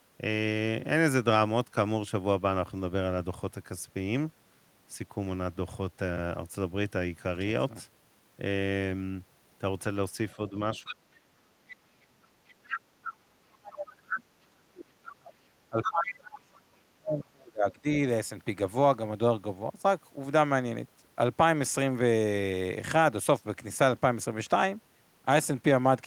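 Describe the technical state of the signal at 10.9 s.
At 10.9 s the speech is pushed down as double-talk suppression takes hold from 10.36 to 12.21 s, dipping by up to about 35 dB, deeper and more fragmented than ordinary gain riding. The likely cause is an echo canceller turning down both its talker and the loudspeaker echo while both sides talk. Under it, the other side's voice leaks through from 10.75 to 10.94 s, a scrap about 20 dB below the speech. Unlike room reverberation, this is a second talker, likely loudspeaker echo the canceller left behind.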